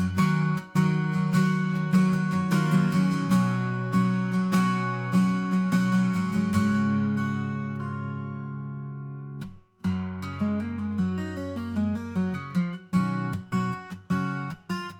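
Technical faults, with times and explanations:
No technical faults are present; the signal stays continuous and intact across the whole recording.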